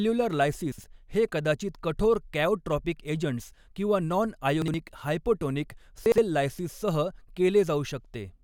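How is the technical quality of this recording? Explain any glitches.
The speech has three short jumbled glitches, all chunks out of order. At 0.72–0.84 s (just before "हे कदाचित कठोर कॅओट्रॉपिक"), 4.62–4.74 s and 6.06–6.18 s, a 60 ms chunk plays one chunk late, swapping two pieces. Each swap gives a brief garble at the hard joins. Unlike a dropout or a repeat, nothing is missing or doubled.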